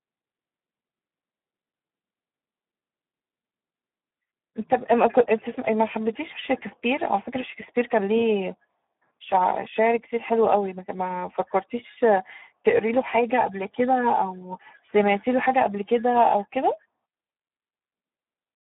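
From start to end, the speech carries Speex codec damage, and it is heavy. The sound points to a setting near 8 kbps. At that rate the CELP coder has few bits left for the excitation signal. Voiced sounds turn hoarse and noisy. The band is narrow, running from about 150 Hz to 3.6 kHz. Nothing is heard above 3.8 kHz, so the speech sounds thin and boxed in.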